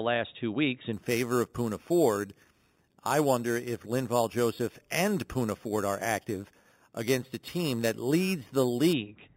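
From 0.93 to 8.93 s there's imaging from sample-and-hold upsampling: a metallic fizz about 16 dB down, mirrored into 4–8 kHz, which fits 8 kHz speech held up to 48 kHz unfiltered.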